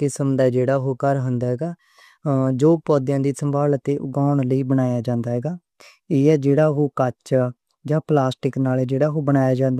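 Nothing in this stretch of speech catches the ear as going wrong; it just runs along from beginning to end with nothing worth pointing to.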